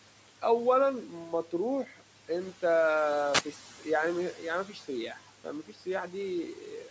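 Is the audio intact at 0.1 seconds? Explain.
Yes, the speech at 0.1 seconds is intact, with no fault at that moment.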